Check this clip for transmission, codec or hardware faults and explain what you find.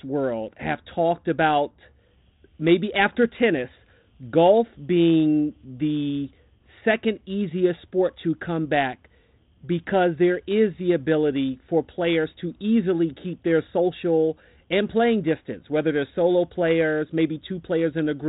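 No transmission, codec or hardware faults turn up in this speech, which arrives through a G.726 ADPCM path at 32 kbit/s that leaves only light coding texture and a band ending near 3.9 kHz, as that telephone coding normally does.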